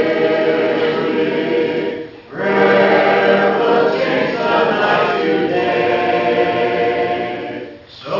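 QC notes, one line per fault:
Throughout: aliasing. Content above 6 kHz was not filtered out before a sample-rate drop, which fits a new rate of 12 kHz. Those high frequencies fold back below 6 kHz and land at wrong, unrelated pitches. The folded energy sits roughly 25 dB under the main sound. Bright, hissy and sharp parts turn gritty and metallic. The spectrum runs hard up to the 6 kHz edge and then stops.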